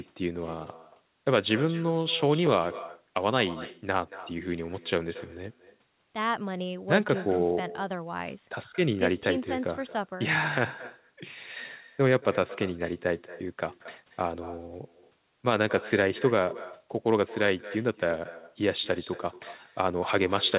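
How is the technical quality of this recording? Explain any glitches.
The recording has one fault that persists throughout: uncancelled echo, heard over telephone-band speech that stops at 4 kHz, as expected for a G.711-style narrowband call. Throughout the clip, there is echo with no canceller: the far end's loudspeaker feeds its microphone, returning each phrase about a fifth of a second later, about 16 dB quieter and thin.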